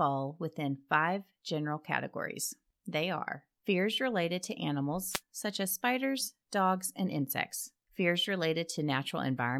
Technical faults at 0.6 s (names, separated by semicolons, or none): none